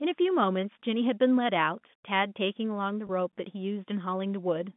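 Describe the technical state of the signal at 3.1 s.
Packet loss with pitch repetition: about 20 ms of audio went missing between 3.07 and 3.09 s, which fits two 10 ms packets, and the receiver filled the gap by repeating the last pitch period, so the sound briefly holds with a slightly buzzy quality.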